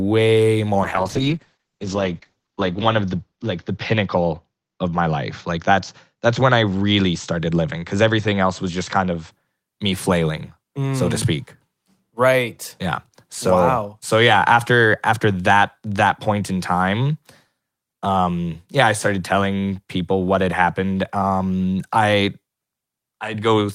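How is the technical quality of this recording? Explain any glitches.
There's one real problem: a call bitrate drop from 0.84 s to about 9.37 s. The connection's bandwidth estimate fell, so the encoder was told to spend far fewer bits, and what you hear fits a slide from around 32 kbps down to 8 kbps. The speech gets coarse and watery, and the top end is shaved off, with the audio band narrowing from 20 kHz to 8 kHz. It's at its worst for about 1.6 s before the bitrate climbs back and the brightness returns.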